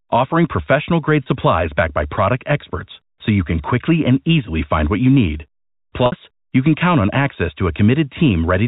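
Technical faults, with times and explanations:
1.23 s and 6.06 s, packet loss with pitch repetition: gaps of 30 ms and 60 ms were bridged by repeating the last pitch period, so the sound briefly holds and buzzes at the first, while the longer second gap fades into silence before speech returns with a short cross-fade.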